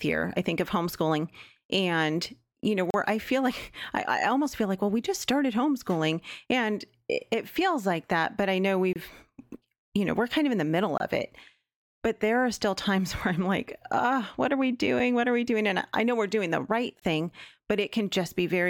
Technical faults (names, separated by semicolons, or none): gap between stream segments